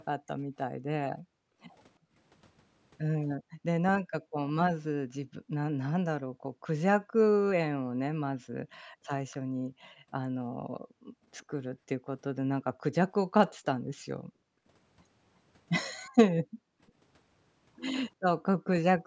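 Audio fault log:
1.22–2.17 s, 3.38–12.83 s, 14.21–14.66 s, 16.43–16.8 s, background gated by the echo canceller: the room tone keeps dropping away by about 40 dB (about 37 dB at 14.21 s) whenever the far end's loudspeaker plays, because the canceller clamps the mic down hard. That's roughly half a second each time, except the long stretch, where about four seconds in total is ducked in bits.
11.39–11.45 s, echo leak: a faint, brief scrap of the voice comes back about 353 ms late and around 35 dB below the speech. It's likely the far side's canceller not fully removing what its mic picked up from the loudspeaker, which then got sent back.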